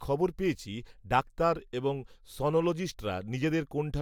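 No technical faults can be heard anywhere in the recording; the signal stays continuous and steady throughout.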